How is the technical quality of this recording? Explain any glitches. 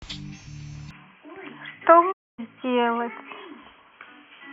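The recording has two clear faults: a sudden narrowing of the sound's bandwidth early on, and a short muted gap a little later.

From 0.91 s to the end, the speech abruptly loses everything above 3.3 kHz and turns boxy, with no gap, no level jump, and a faint new noise floor about 50 dB down. That points to the input likely being switched to a poorer device. A lowpass filter would not bring its own noise.

From 2.11 s to 2.40 s, a digital broadcast dropout mutes the audio for about 256 ms, which fits roughly eight lost frames, after a quick 20 ms fade. The receiver silenced failed data. Unlike a switching gap, the sound quality is unchanged on either side, and the lost speech never returns.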